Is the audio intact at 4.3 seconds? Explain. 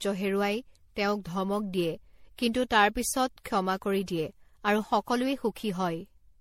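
No. At 4.3 s the speech carries generation loss, as it does throughout the clip. Around ten lossy passes, likely through an MP3 encoder at a setting that points to 64 kbit/s, each requantised on a shifted frame grid, so noise and spectral gaps have piled up, with nothing above 16.5 kHz. A single encode at that rate would sound less damaged. This sounds swirly, hollow and smeared, with blurred attacks.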